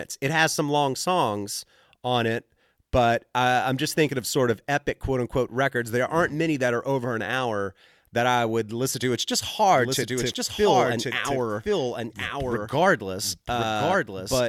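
A doubled audio track begins at 9.74 s and runs to the end: a second copy of the speech enters abruptly, trailing the original by about a second and sitting somewhat lower, around 5 dB down. The copy is full-band and dry, with no decay or room colour, so each phrase is followed by a flat repeat of itself. The likely cause is the same signal reaching the mix twice, once through a slower path.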